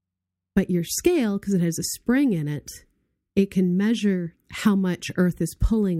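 Nothing in the recording stands out as a technical fault, so there's nothing here to point to at any moment.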